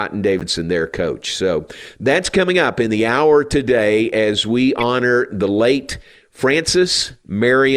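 Speech with two corrupt frame decoded events: 0.39–0.42 s, before "their coach", and 4.79–4.83 s, between "hour today as we" and "the late". Each damaged stretch of a couple of frames becomes a burst of misplaced energy peaking around -10 dBFS, not the smoothed fill of a dropped frame.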